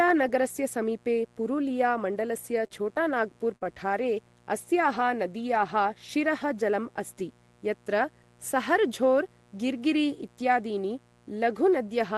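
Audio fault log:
Throughout: mains buzz. A steady, raspy buzz sits about 35 dB below the speech. It is built on 60 Hz, with sharp switching spikes twice per mains cycle, 120 times a second, and harmonics climbing to several kHz, as a dimmer, rectifier or unshielded lead would inject.
2.67–2.83 s: short concealed packet loss. About 20 ms of audio never arrived, and the receiver bridged it with 22 ms of sound extended from what came before, then crossfaded back. The result is a brief smear or wobble, with the timeline running a few milliseconds long.
2.76, 3.76, 3.90, 5.36 and 5.40 s: lost packet rebuilt from error correction. Each 20 ms frame was replaced by the low-bitrate copy carried in the following packet, so nothing drops out. The passages turn rougher and noisier.
3.56–3.65 s: burst of packet loss. About 60 ms of consecutive audio was lost. The decoder filled 52 ms by prolonging the last sound and fading it, heard as a held buzz or fading hiss, and added 11 ms overall before the speech picks up further along. 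The underlying Opus call path, which fits a bitrate around 32 kbps, contributes its usual coding noise.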